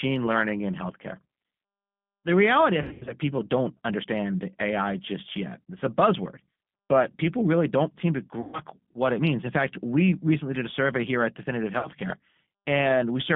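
Throughout the clip the speech passes through a G.729 codec at 8 kbit/s, which models each 10 ms frame as a vocal tract filter plus a pitch predictor and a handful of pulses rather than sending the waveform itself. The result is a telephone band of roughly 150 Hz to 3.5 kHz with nothing above it, and a plainly audible rough, slightly synthetic grain on every syllable.

VoIP packet loss concealed by the speech codec occurs three times. From 2.83 to 3.14 s, after "reality I" and before "people don't understand", about 180 ms of audio went missing in bursts spread over 240 ms, the longest gap 80 ms. The decoder patches each gap by extending its last pitch and filter at falling gain, so the sound smears into a buzzy tone or coloured noise that fades. The damage lingers briefly after good packets resume because each frame builds on the one before. From 8.41 to 8.60 s, between "really don't seem to" and "what it means", a 120 ms gap produces the same stretched, fading sound. 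A shorter 60 ms dropout at 11.79 to 11.88 s gives a brief smear.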